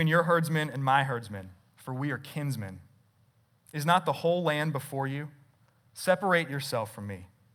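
Listening through the speech, nothing stood out as a technical problem at any point.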